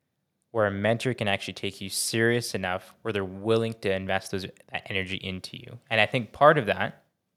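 No technical faults turn up anywhere in the recording.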